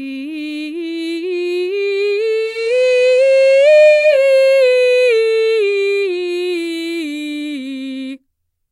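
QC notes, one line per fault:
2.36–4.25 s, digital radio blending to analogue: the receiver lost the digital stream and cross-faded over about 375 ms to the station's FM feed and back, so hiss comes up roughly 30 dB below the music, with no change in level.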